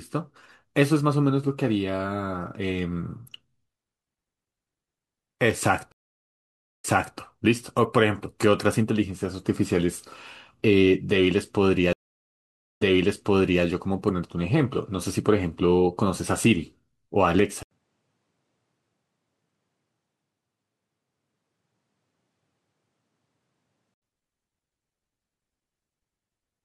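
Stream reconnects break the audio at 5.92 to 7.18 s and 11.93 to 13.64 s. Each drops out for about 0.9 s. Playback then resumes 0.34 s and 0.84 s earlier, repeating sound.

From 17.63 to 24.02 s, a brief 80 ms gap leads into duller, band-limited sound, empty above 10.6 kHz, about 5 dB quieter with a faint new noise floor. The likely cause is an input switched to a poorer device.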